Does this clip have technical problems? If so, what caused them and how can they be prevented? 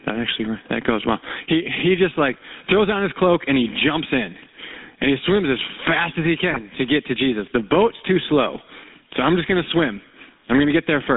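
Yes. Throughout, loud and soft parts sit closer in level and the sound is squashed, with a gain swing of around 20 dB. That points to gain pumping, likely from input gain set far too high and a fast limiter clamping it. Unlike simple noise, the swell follows the loudness. Set the gain lower so the limiter rarely acts.

The whole clip has the buzzy, gravelly roughness of the GSM full-rate codec, band-limited to 200 Hz to 3.7 kHz, which fits 13 kbps pulse-excited coding. Plain narrowband telephony would sound band-limited without that grit. Use a wideband or modern codec.

GSM bit errors cause squawks and gargling from 6.51 to 6.61 s, between "as fast as he" and "to get to". Corrupted decoder parameters distort the spectrum, rather than dropping sound as packet loss would. A stronger radio link prevents this.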